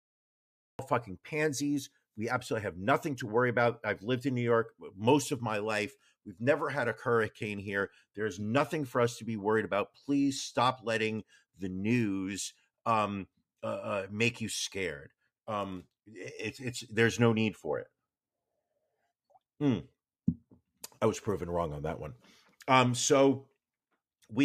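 It's a speech recording with a cut-off start. The first 0.79 s is dead digital silence, and then the audio jumps straight in at 0.79 s partway through a sound, with no natural attack or lead-in fade. That abrupt entry is the giveaway: the recording or stream began capturing late, after the talker had already started, so the front of that first sound was never captured at all.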